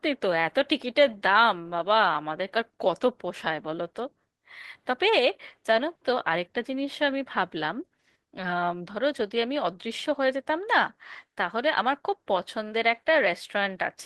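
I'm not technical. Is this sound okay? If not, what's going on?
Yes, this sound is okay, and there's nothing going on that needs fixing.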